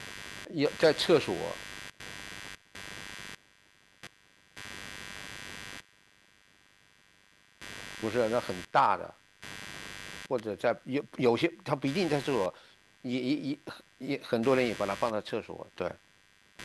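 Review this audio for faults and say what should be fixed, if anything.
Computer activity noise runs through the whole speech clip: a buzzy chirping pulsing at around 100 Hz, sitting roughly 20 dB below the voice and tracking the machine's load rather than the talking. Fix it with a ground-loop isolator or an external USB interface.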